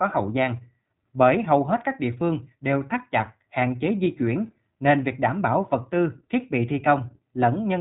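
Throughout, the speech sounds muffled and a little rough and synthetic, with nothing above 3.8 kHz. This is plainly audible iLBC codec damage, consistent with 15.2 kbps in 20 ms frames.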